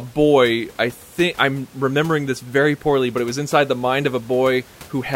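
No technical faults are audible.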